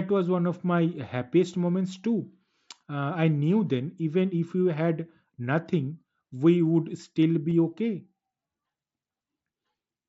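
Concealed Bluetooth headset packet loss occurs at 7.50 s in this speech, where about 15 ms of audio, consistent with two lost headset frames, never arrived. The receiver bridged the gap by repeating a closely matching recent stretch, leaving a brief buzzy tone with a small warble where real audio returns over the mSBC path.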